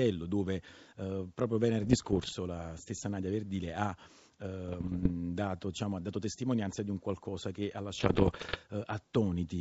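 Bit errors on an ADPCM link strike at 1.82–2.32 s, 4.68–5.11 s (before "dato diciamo ha dato") and 7.98–8.58 s. Flipped bits derail the G.722 decoder's step size and predictor, giving pops and rough bursts with brief level swings. The last burst is harshest, with errors near two percent.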